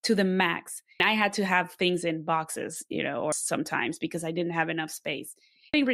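At 1.0 s and 3.32 s, and again from 5.74 to 5.83 s, damaged data in the compressed stream produces short glitches. The decoder misreads corrupted frames, loses sync and hunts for the next valid frame header, briefly garbling the audio.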